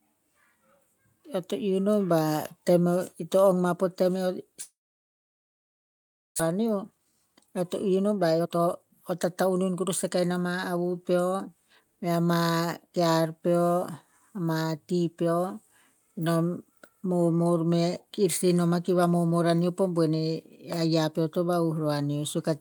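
From 1.24 to 2.05 s, automatic gain rising lifts voice and background together by about 3 dB, a gradual swell ending just before "ba tem o ito".

At 4.61 s the sound gives way to a fading buzz or hiss, then near-silence until 6.42 s; a long network dropout is the likely cause, with about a second of audio never played.

From 6.52 to 11.81 s, a jitter buffer speed-up trims short pitch-period pieces, running speech at 114% speed with unchanged pitch, hurried until "mea ma kear peo".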